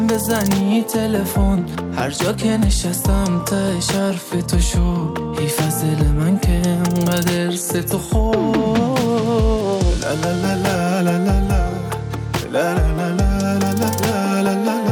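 Nothing here calls for comment, since no technical faults turn up anywhere in the audio.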